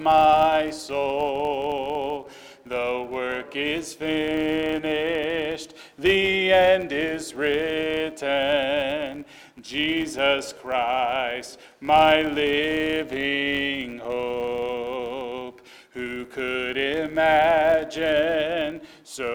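All the way through there's a filter restarted on every block, clicking at 93.8 Hz, which fits a 512-sample buffer, so you hear a buzz tracking the level.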